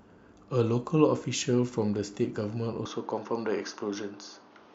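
At 2.85 s the input likely switched to a poorer device. The speech abruptly dulls, losing everything above 6.7 kHz, and gains faint new background noise.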